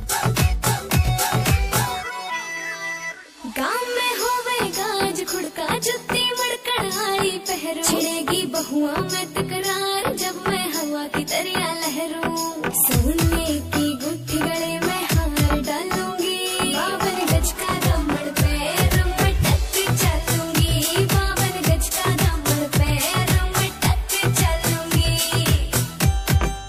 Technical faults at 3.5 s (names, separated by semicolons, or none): channel delay (comb filtering)